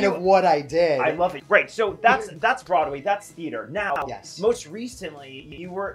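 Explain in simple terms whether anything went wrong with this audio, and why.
Chunks out of order at 3.90–4.02 s and 5.40–5.58 s. A 60 ms piece plays one, then two, places late. It sounds jumbled.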